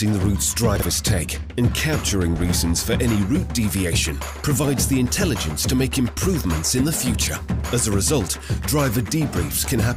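At 0.76 to 0.82 s, chunks out of order: one 20 ms chunk plays two chunks late, giving a jumbled blip, seen as three vertical spectrogram lines and waveform steps.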